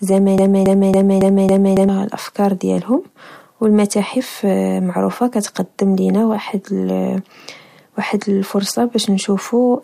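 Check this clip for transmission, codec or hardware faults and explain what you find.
There's one clear fault in this speech clip: a broken-record loop from about 0.38 s to 1.89 s. A snippet roughly 0.28 s long plays five times back to back, identical each pass, so it stutters mechanically instead of moving on. The likely cause is a stall somewhere in the chain, with the player or stream re-sending the last chunk it had in hand. Whatever should have played in that stretch is simply gone.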